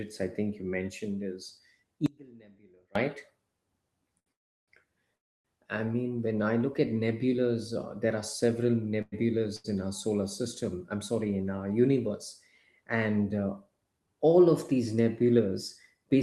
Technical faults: audio dropout to a faint residue; short stall from a late packet; call audio freeze

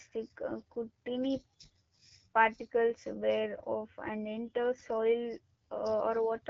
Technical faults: AMR wideband (HD Voice) codec

